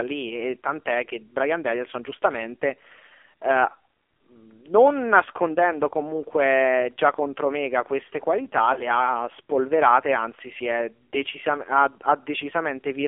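Throughout, the speech carries the sound of the AMR narrowband mobile codec at a low rate, 5.9 kbps. The line band runs from 300 Hz to 3.4 kHz, so nothing higher survives. The coding damage is heavy, leaving the voice buzzy and synthetic.

From 8.74 to 8.87 s there is a brief dip and warble from lost AMR speech frames. The decoder filled the gap by repeating its last good pitch and vocal tract settings at falling gain. The short disturbance points to a single lost 20 ms frame.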